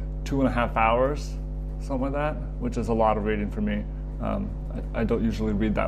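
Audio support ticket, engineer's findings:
Ground loop or nearby transformer coupling the power line into the signal path: mains hum, steady 50 Hz tone with low harmonics, throughout, strong, nearly as loud as the signal.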